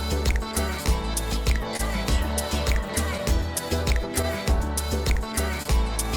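Throughout the clip there is clock drift between sender and receiver: the sending clock runs roughly 2% slow against the receiving one, so the jitter buffer keeps draining and the receiver has to pad it by repeating short pieces of what it already has, now and then briefly running dry. The result is a series of small timing hiccups scattered unevenly across the whole recording, so the audio never settles into a perfectly steady flow and occasionally seems to catch or stutter for an instant. Between 0.31 and 1.81 s, scattered short gaps appear where a handful of packets, about four, went missing or arrived too late, and the receiver concealed each hole by carrying the preceding sound forward. Only around 50 ms in total gets patched this way, the longest single fill near 30 ms, so the sound stays clear but picks up brief ticks and little smeared moments. At 5.63 to 5.67 s, there is a short stall from a late packet: the buffer ran empty when a packet failed to show up on time, and the receiver held the last sound for 27 ms until it arrived, then resumed from the same point. 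Nothing is lost, yet that moment is audibly drawn out, with a faint buzzy or dipping quality.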